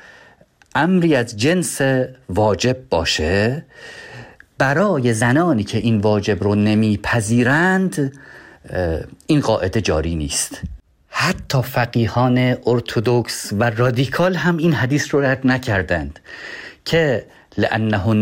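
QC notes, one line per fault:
4.80–5.52 s and 12.08–12.83 s, drift correction step: in each window the speech runs about 5.4% fast and rises in pitch by about 91 cents, just under a semitone, then snaps back to normal rate and pitch. Speed and pitch move together and hold steady for about 0.7 s each time. This likely comes from clock-matching software stepping its playback rate to drain or refill a buffer, then returning to nominal.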